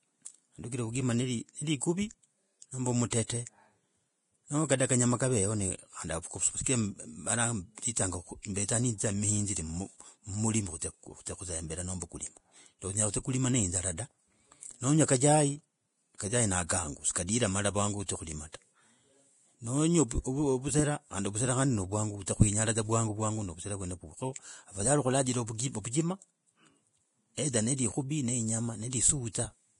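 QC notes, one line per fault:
Throughout: low-bitrate audio saved at a high bitrate. The speech has no content above 10.6 kHz and carries the artefacts of heavy lossy coding, yet it sits in an MP3 at a high rate, which points to a source near 31 kbit/s, likely Vorbis, re-encoded at around 320 kbit/s. The second pass preserved what it was given; the missing top band and earlier artefacts were already baked in and cannot be recovered by the larger file.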